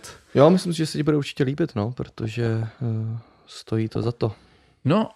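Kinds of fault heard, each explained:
DAB burbling: bit errors slip past the error correction and put short blips of noise into single sub-bands after "bude určitě líbit no" and around 3.9 s.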